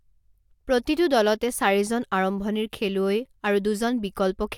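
No technical faults are audible.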